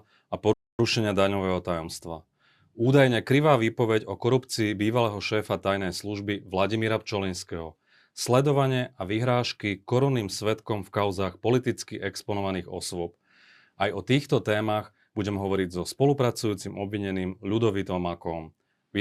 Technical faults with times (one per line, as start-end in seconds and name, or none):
0.53-0.79 playback stall